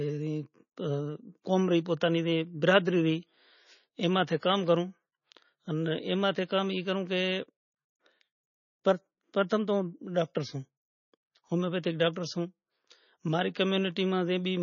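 MP3 compression throughout the speech: nothing above 6.9 kHz, and heavy watery swirl as weak frequency lines flicker, likely from a bitrate near 24 kbps.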